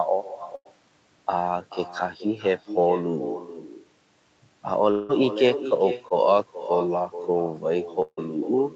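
From start to finish every phrase is trailed by a fainter, thinner copy of itself arriving roughly 0.4 s later, sitting about 12 dB below the direct speech. This is echo with no canceller: the far end played the call through a loudspeaker, its microphone caught that playback, and nothing subtracted it before it was sent back. The talker's own speech therefore returns after the network round trip, shadowing everything said.

At 0.55 to 0.67 s the speech turns into a brief held, fading continuation of the last sound for about 97 ms, then picks up again a little further along. That is a burst of packet loss. Around 100 ms of audio never arrived in time, so the receiver stretched the last sound and turned it down across the gap, and the stretch of speech in between is simply gone.

From 4.91 to 5.11 s a longer stall occurs. The last sound is drawn out and fades for about 177 ms with no fall into silence before the speech resumes, having skipped about 180 ms. 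This is a long network dropout, most likely a stretch of packets that failed to reach the receiver, with concealment covering nearly the whole hole.

Between 6.09 and 6.12 s there is a tiny smear lasting only about 13 ms, a quick wobble in the flow rather than an obvious break. This is short concealed packet loss. About 20 ms of the call missed the decoder, which extended the preceding sound from its pitch or as shaped noise and then blended back into the real signal.

At 8.02 to 8.19 s a second long network dropout appears. The fading continuation of the last sound carries on for about 151 ms and then drops into roughly 50 ms of silence before the speech returns, with about 140 ms of content lost. Here the concealment ran out before audio resumed, which is why a short silent gap is left at the end of the fill. All of this sits inside a call path whose audio stops at 8 kHz, which fits Opus running at a wideband setting.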